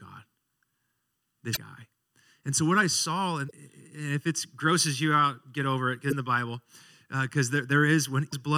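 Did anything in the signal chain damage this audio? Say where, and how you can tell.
Yes. The damage is at the codec stage, as damaged data in a compressed stream. Four short glitches of about 40 ms each break the speech at 1.53 s, at 3.47 s between "so what I saw" and "if it grosses you", at 6.09 s just after "out get over it", and at 8.29 s. At each one, corrupted bytes made the decoder misread frames, lose sync and hunt for the next valid header.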